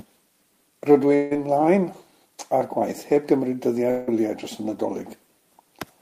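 Speech with two short breaks, from 1.15 to 1.33 s and from 3.91 to 4.09 s, where the sound smears into a fading buzz before resuming. Both are likely a long network dropout: about 160 ms went missing each time, and the receiver papered over it by extending the preceding sound. On a spectrogram each gap shows smooth, repeating bands that fade out, and the waveform jumps abruptly back to normal speech.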